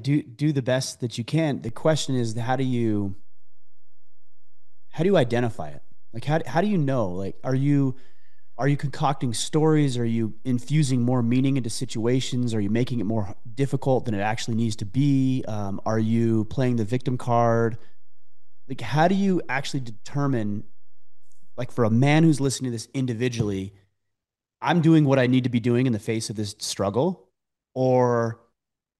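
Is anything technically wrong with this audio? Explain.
Yes. At 1.69 s there is a low thump, and a matching thump at 22.45 s, while the sound itself carries on unchanged. This is a DC step: the waveform's zero line suddenly jumps by about -29 dBFS and holds at that offset for roughly 21 seconds before returning. Each abrupt shift of the baseline is reproduced as a brief low-frequency bump, the kind of jump produced by a converter recalibrating or an offset-carrying input being switched in.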